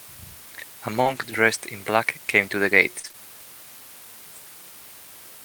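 A steady, even hiss sits under the whole clip, roughly 20 dB below the speech, with no distortion. This is low bit depth with dither, and it fits about 7-bit resolution. The hiss stays constant, unlike codec noise, which comes and goes with the signal.

At 1.01 s, about 40 ms of short concealed packet loss begins. The missing audio is bridged by extending the preceding sound, which gives a brief smear that runs until 1.07 s rather than a clean gap.

Overlapping it, from 1.05 to 1.23 s, about 100 ms was rebuilt from error correction, which points to several lost packets. These are lower-quality copies, so the sound turns rougher and noisier but never drops out.

From 2.99 to 3.15 s, repeated packet loss produces choppy, robotic sound across three gaps, the longest 42 ms. About half of that stretch is patched guesswork.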